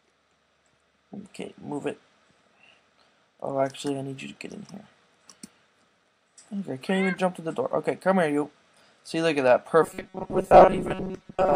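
Likely late audio delivery forces the same roughly 5 ms buffer to repeat over most of the sound from 9.83 s to 11.56 s, producing robotic sound from repeated short buffers: a rigid, metallic 188 Hz buzz.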